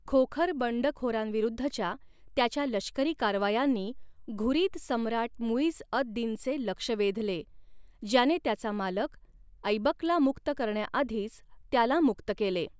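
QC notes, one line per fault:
No faults are heard anywhere in the speech. Nothing in it calls for a timestamp or a fix.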